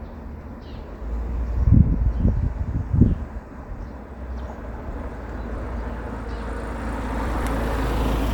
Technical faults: frames out of order

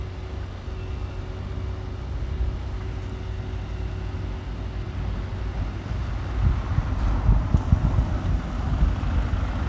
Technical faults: none

